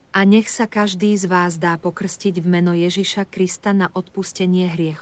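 No technical faults can be heard in this speech recording, which has passed through ordinary call microphone processing that rolls off the lowest bass and leaves nothing above 8 kHz, both normal for that path.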